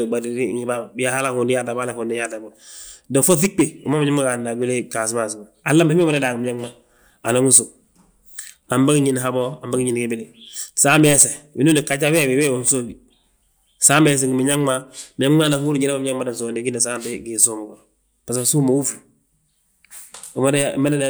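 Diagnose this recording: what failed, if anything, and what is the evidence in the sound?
Nothing failed in this recording.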